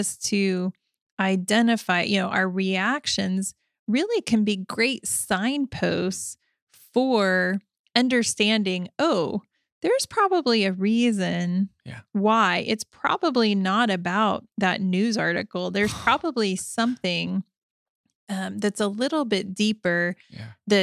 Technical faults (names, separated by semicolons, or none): none